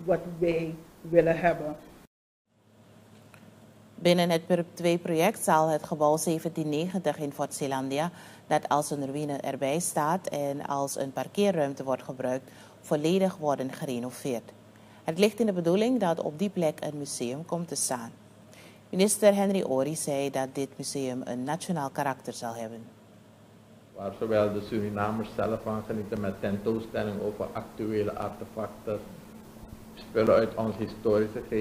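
From 26.16 s to 30.27 s there are periodic USB or driver dropouts. Something stalls the audio path every 1.024 s. A few milliseconds of audio vanish each time, replaced by silence. About five evenly spaced ticks result, heard over the signal.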